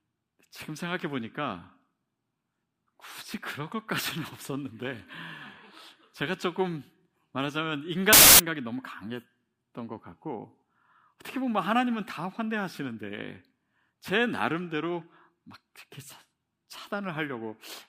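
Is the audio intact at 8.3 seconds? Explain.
No. A wrong sample width fault runs from 8.13 to 8.39 s. The sound fits 16-bit samples being read back as packed 24-bit ones: each decoded value straddles the boundaries of the original samples, so many are assembled from mismatched bytes and only some keep the true signal's high-order bits. The speech sits buried under loud noise, and it plays back 1.5 times too fast, with its pitch raised by the same ratio.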